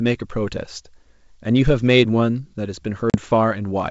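Packet loss on an ADPCM call, 3.10 to 3.17 s: a 40 ms hard-edged silence, then speech returns slightly distorted while the decoder's predictor resynchronises.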